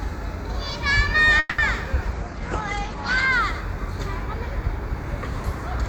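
At 1.39 to 1.61 s, a call audio freeze stalls the everyday sound. It fades into a brief buzz, then resumes where it stopped. Held-up packets likely emptied the jitter buffer. The 190 ms gap is inserted, with nothing lost.

From 2.17 to 3.38 s, a call bitrate drop makes the sound rough and muffled. Content above 8 kHz is gone. This fits the encoder falling from about 128 to 14 kbps.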